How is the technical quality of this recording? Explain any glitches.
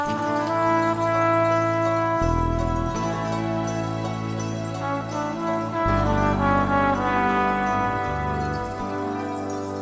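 No glitches or faults can be heard in this recording.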